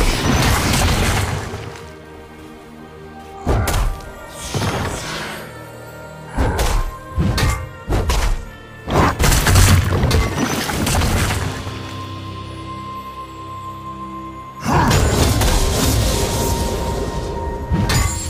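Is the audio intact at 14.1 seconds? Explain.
Yes, at 14.1 seconds the audio plays through cleanly, with no dropout, click, distortion or other fault to be heard at that point.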